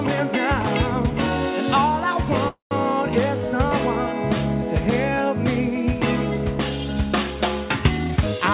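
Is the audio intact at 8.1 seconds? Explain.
No, 8.1 s falls inside a jitter buffer speed-up from 7.97 to 8.40 s. The receiver drained surplus buffered audio by cutting out short pitch-period pieces, about a tenth of a second in all, so the sound runs roughly 127% fast at unchanged pitch. A waveform shows whole periods missing, and a spectrogram shows harmonics at the same height but squeezed in time.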